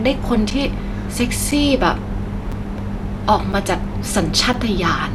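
At 0.50, 1.51, 2.52, 3.52 and 4.53 s, a gap between chunks cuts hard 6.5 ms silences into the speech, one per 1.0 s chunk. Their strict regularity and the absence of missing sound set them apart from random dropouts.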